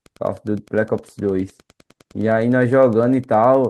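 Wi-Fi interference runs through the whole clip. A nearby radio's beacon, rectified by the audio circuit, ticks every 102.4 ms, faint and well below the speech.

From 0.92 s to 2.53 s comes a call bitrate drop. The encoder codes more coarsely, and the speech turns rough for about 1.55 s. This fits a fall from about 32 to 15 kbps.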